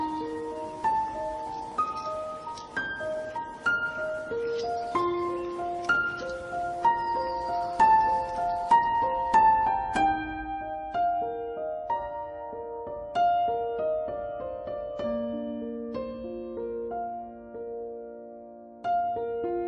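From start to end the audio has a wrong sample rate. Everything runs at 0.667 times its proper speed and about 7 semitones low, which fits 48 kHz material played back at 32 kHz. On a spectrogram, every feature sits lower in frequency and is stretched wider in time.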